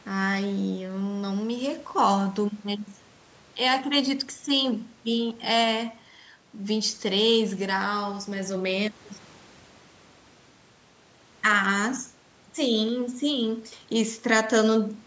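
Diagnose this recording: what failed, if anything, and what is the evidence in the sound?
Nothing failed; the speech went through normal call microphone processing, with nothing above 8 kHz and the lowest bass trimmed as expected, so no stage shows a fault.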